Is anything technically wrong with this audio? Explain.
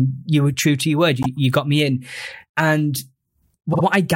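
Yes, this speech has repeated frames at 1.22 s and 3.72 s. A 52 ms block, which fits two compressed frames, plays again: once at 1.22 s and twice at 3.72 s, adding about 52 ms and 104 ms. Each repeat is a brief stutter. Unlike a dropout, nothing goes missing. The same sound recurs, lengthening the audio.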